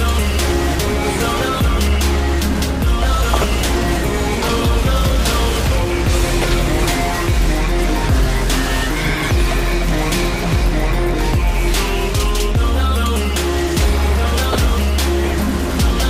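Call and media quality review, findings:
DAB burbling at 3.33–3.44 s, 6.41–6.44 s and 14.44–14.55 s: brief burbling over the programme. Weak reception likely let residual bit errors, at a fraction of a percent, corrupt MP2 samples and scale factors, causing noise blips in single sub-bands and level jumps lasting up to a frame.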